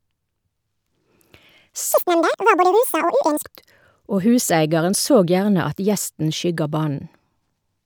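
From 1.93 to 3.44 s the audio gets read two samples at a time, so the speech runs at double speed and jumps an octave.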